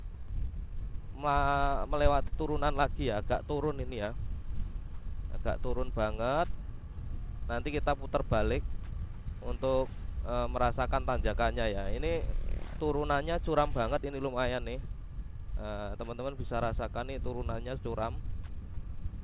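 The audio has come through a call path, band-limited with nothing above 4 kHz, which fits narrowband G.711 A-law at 64 kbps. At 2.28 to 2.35 s there is short concealed packet loss: roughly 40 ms of audio arrived too late for the decoder, and the receiver papered over it by extending the preceding sound before fading back into the real signal. It comes across as a brief smear or wobble. On a waveform the gap shows as a stretch of repeated, overly regular cycles or a flattened envelope. On a spectrogram it shows as a short band of smeared, copied harmonics or diffuse noise.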